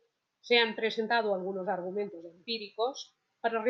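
No technical faults can be heard at any point in the recording.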